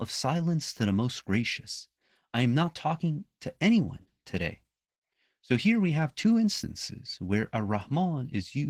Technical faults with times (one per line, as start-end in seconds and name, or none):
0.00-8.69 Opus voice compression